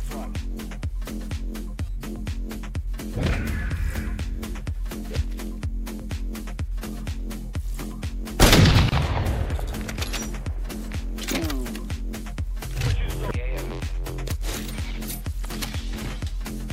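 At 8.89 to 8.92 s there's a gap at a join of encoded pieces: about 30 ms of untrimmed encoder padding cuts out the sound, then it resumes where it stopped.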